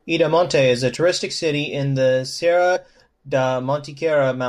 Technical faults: compressed frames skipped

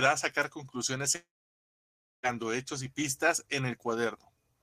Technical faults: long network dropout

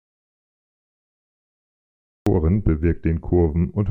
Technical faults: audio dropout to silence

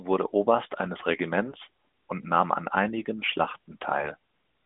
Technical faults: AMR bit errors

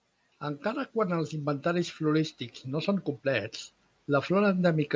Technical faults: automatic gain rising

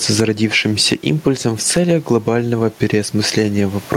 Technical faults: gain pumping

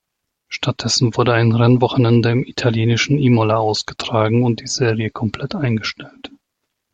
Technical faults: none

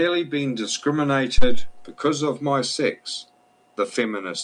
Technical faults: phantom power thump

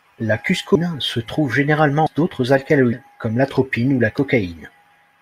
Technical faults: compressed frames skipped

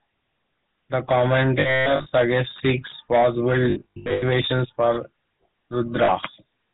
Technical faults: GSM full-rate codec; lost GSM frames

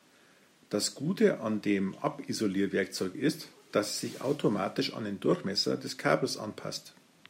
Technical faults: none

